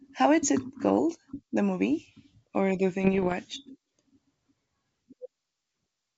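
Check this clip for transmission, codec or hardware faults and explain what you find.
One transmission fault is audible in this speech, on what sounds like a G.722 wideband link. From 3.01 to 3.34 s there are bit errors on an ADPCM link. The error rate is around half a percent. Each flipped bit throws off the decoder's step size and predictor, so the damage rings on briefly. It is heard as pops and rough bursts with short level jumps.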